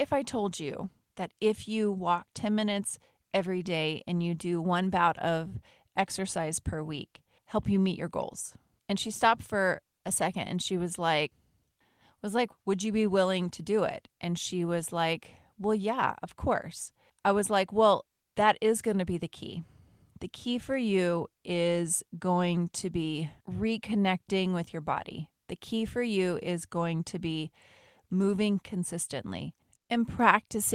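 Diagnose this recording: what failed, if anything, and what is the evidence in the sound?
Nothing in the speech stood out as a fault on listening.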